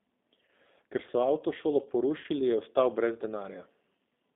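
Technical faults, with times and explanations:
Throughout: G.729 codec. The whole thing sounds like a narrowband phone call, held to roughly 200 Hz to 3.7 kHz, with that rough, slightly synthetic edge you get when speech is rebuilt from a filter, a pitch predictor and a few pulses. The texture fits an 8 kbit/s G.729A line.
0.45–0.49 s and 2.21–2.26 s: VoIP packet loss concealed by the speech codec. Each time about 30 ms goes missing, the second one right after "so avtošolo". The decoder stretches its last sound into a fading buzzy tone or coloured noise, and the speech stays weak or distorted going into "je ostal brez".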